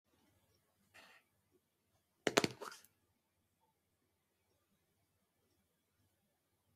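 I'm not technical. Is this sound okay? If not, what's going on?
No. All the way through, a noise suppressor built for speech is working on sounds it wasn't designed for. It mistakes steady, held sound and lingering tails for background noise and turns them down sharply, while sudden onsets slip through. The result pumps and thins out. Unlike real dropouts, the sound never cuts off completely or at random. It sinks deeply just after each onset, again and again, following the sound itself.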